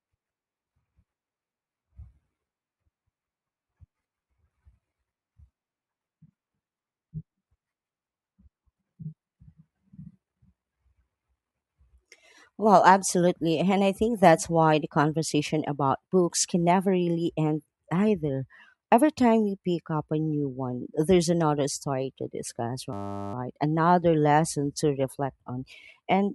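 A steady 100 Hz buzz replaces the speech from 22.93 to 23.34 s, just after "another story to discuss": a system hang loop, with the hardware replaying one 10 ms buffer while the system froze.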